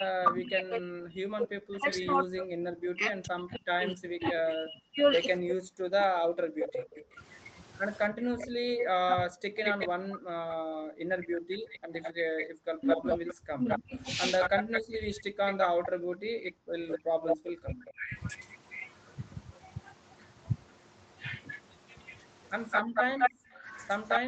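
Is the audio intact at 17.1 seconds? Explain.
No. At 17.1 s three faults overlap.

Speech suppressed in double talk runs from 0.0 to 18.15 s. Both ends are talking, and the echo canceller, likely unable to tell this talker from the loudspeaker echo, turns everything down. The voice dips, dulls or breaks into fragments, with drops of up to about 40 dB across roughly seven seconds in total. A waveform shows sudden collapses in the envelope, and a spectrogram shows energy thinning or vanishing in blocks.

An echo leak is present from 1.74 to 17.92 s. The loudspeaker side's canceller likely fails to remove everything its microphone picks up from the loudspeaker, so a copy of the voice returns 208 ms late, at roughly 10 dB below the direct speech. On a spectrogram each syllable's pattern repeats faintly about 0.2 s later. On a waveform, small repeated bursts trail the main ones.

Background gated by the echo canceller occurs between 16.38 and 17.38 s. 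While the loudspeaker plays, the canceller clamps the microphone, and the room sound drops by as much as about 30 dB, for roughly 0.7 s altogether, then snaps back when it releases. A spectrogram shows the noise floor going dark with sharp edges, and the waveform's low-level floor flattens to near silence. All of this sits within the call path's 8 kHz upper limit.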